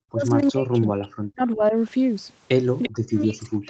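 Speech suppressed in double talk appears first at 0.09 to 0.25 s. The speech dips by about 25 dB over roughly 150 ms, likely because the echo canceller, hearing both sides at once, could not tell this talker from the loudspeaker echo and pulled everything down. It returns far harder from 0.43 to 1.74 s. The level drops by as much as about 40 dB, with around a second of that stretch held down.

An echo leak follows at 2.83 to 2.89 s: a brief scrap of the speech comes back about 344 ms late, sitting roughly 15 dB under the main signal. The likely cause is the far end's echo canceller, which left part of what its microphone picked up from the loudspeaker and sent it back down the line.

Speech suppressed in double talk starts again at 2.86 s, overlapping that leak, and lasts to the end of the clip. The level again falls by up to about 40 dB, so the closing speech is pushed down. This is the same likely clash of both sides talking at once. 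Throughout, the audio tops out at 8 kHz, as expected from the Opus call path.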